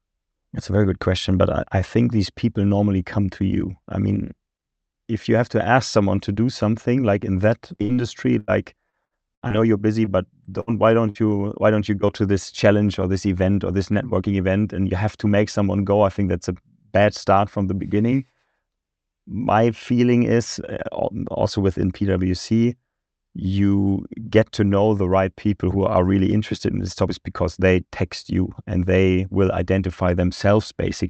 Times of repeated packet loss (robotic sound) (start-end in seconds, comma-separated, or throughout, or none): 7.75-11.18